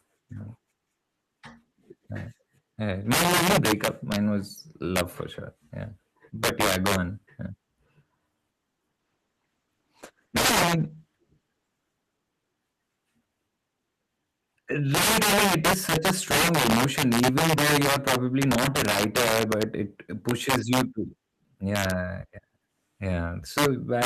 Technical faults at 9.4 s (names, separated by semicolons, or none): integer overflow; call bitrate drop